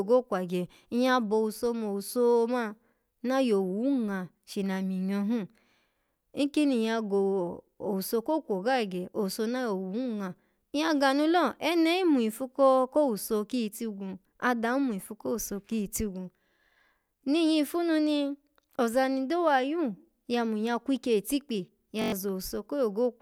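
At 22.02 s, right after "kwikye itikpi", the speech is cut by a system hang loop lasting until 22.12 s. The computer or driver stalled while the sound hardware kept replaying the same ring buffer. One slice of about 21.3 ms repeats exactly five times, which fits a 1024-sample buffer. Because the slice is so short, the repeats fuse into a coarse buzz at about 47 Hz. Roughly a tenth of a second of real audio is missing.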